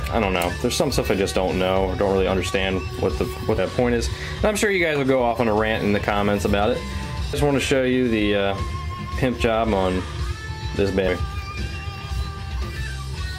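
Skips occur at 3.58 s, 7.33 s and 11.08 s. At each, about a third of a second of sound vanishes, and the two sides butt together with no gap. This is likely audio missing between chunks, lost while one 4-second chunk closes and the next opens.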